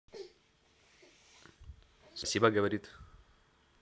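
A speech recording with three abrupt skips, at 0.93 s, 2.24 s and 2.98 s. Each is a sudden jump forward in the speech. No gap of silence is heard. Roughly 70 ms, 100 ms and 30 ms go missing. The likely cause is a dropped buffer (overrun): the hardware overwrote audio before the software read it. The remaining pieces are then spliced straight together.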